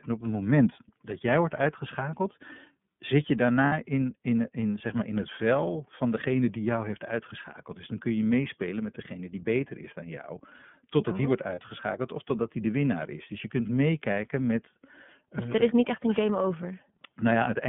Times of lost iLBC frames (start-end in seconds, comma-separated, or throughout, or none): 3.66-3.73, 11.55-11.60